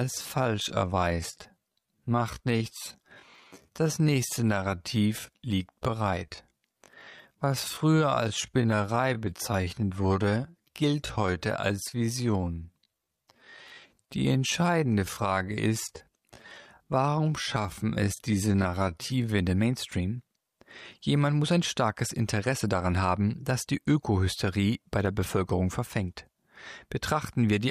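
From 0.0 to 19.38 s, a time-stretched section plays at about 0.68 times normal pace with pitch unchanged, sounding dragged; the spectrogram shows drawn-out harmonics, likely from pitch-preserving stretching software.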